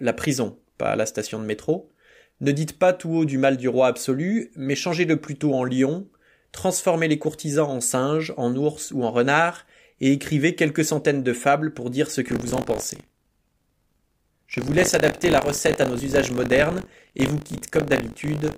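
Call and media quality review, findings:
Buffer tearing from 12.26 s to end of clip, starting just after "fables pour dire ce". Symptom: robotic 50 Hz buzz/rattle riding on the speech, which fits a 20 ms period. Probable component: playback ring buffer, writer and hardware reader slipped so they cross each period. A small slice of every buffer replays audio roughly 40 ms stale, with hard splices both sides. Unlike mains hum at the same pitch, the buzz vanishes in pauses and appears only with signal.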